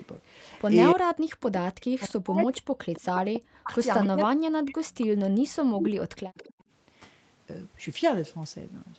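From 0.00 to 0.64 s a faint delayed copy of the speech trails the talker by 0.28 s, sitting far below the direct sound, around 30 dB down. This is an echo leak, most likely from a far-end loudspeaker whose echo canceller let part of the returned signal through. The fixed 0.28 s lag separates it from room reverberation, which would smear the sound continuously rather than repeat it as a distinct later copy.

From 0.93 to 4.83 s the speech is suppressed in double talk. Over about two seconds in total it dips in pieces, by as much as roughly 40 dB, with parts cutting out. This is likely an echo canceller that could not tell the local talker from the returning echo and pulled both down. Inside that stretch, from 2.41 to 4.08 s, the same 0.28 s echo returns much louder, only about 10 dB under the speech. The echo leaks again from 5.00 to 6.63 s at that level.

From 5.31 to 5.42 s the background is gated by the echo canceller. 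The room sound drops by about 36 dB for roughly a tenth of a second and then comes back. Only the ambience falls away, which distinguishes this from the double-talk cuts, where the speech itself is clipped.

From 5.75 to 6.54 s the speech is again suppressed in double talk, in cuts totalling about half a second, down by roughly 40 dB. Throughout the clip the high end stops at 8 kHz, which fits a wideband Opus call at around 32 kbps.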